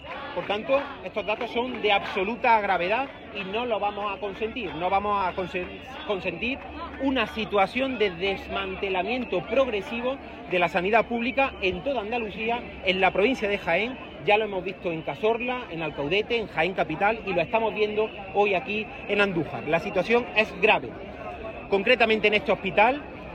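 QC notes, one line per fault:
5.20 s, damaged data in a compressed stream: the decoder loses sync on corrupt frames, giving a brief glitch; a narrow broadband smear and waveform discontinuity appear.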